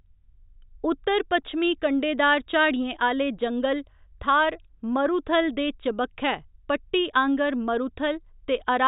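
Nothing in this recording stands out as a technical fault; the speech runs along with no dropouts, glitches or breaks anywhere along the way.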